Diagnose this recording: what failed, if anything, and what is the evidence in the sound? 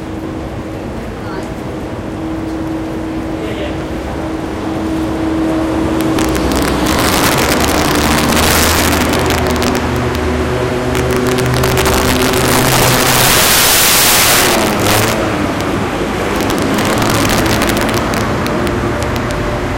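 Integer overflow runs throughout the recording, on every loud peak. The signal is driven about 12 dB past full scale in the gain or sample-format conversion stage, and a few percent of samples exceed the integer range. Instead of being limited, they wrap to the opposite sign, producing violent cracks far harsher than clipping.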